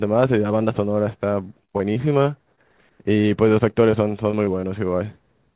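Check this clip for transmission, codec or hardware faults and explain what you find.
Two stretches of repeated packet loss (robotic sound) stand out, from 1.65 to 2.59 s and from 3.21 to 4.65 s. Holes of up to about 23 ms each are bridged by extending the preceding audio, leaving choppy passages with pieces missing. The call path is audible as a hard cut-off at 4 kHz, which fits narrowband G.711 A-law at 64 kbps.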